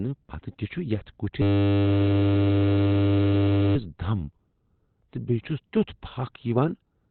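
A speech clip. Throughout, the sound is muffled and hoarse, with nothing above 4.2 kHz. This is likely Opus compression in its narrowband speech mode, which fits a bitrate near 12 kbps. From 1.42 to 3.76 s a system hang loop repeats one 10 ms slice, giving a steady 100 Hz buzz. Little or no audio seems to be lost.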